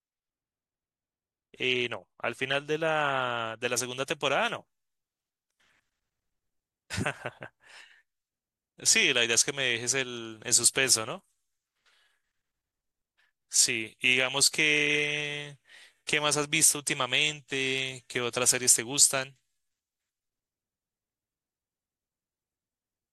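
Speech, with pre-emphasis left on from 3.77 s to the end: the treble sits about 8 dB high at 10 kHz relative to 1 kHz, which fits the CD 50/15 µs curve never being undone. The sound is thin, bright and sibilant.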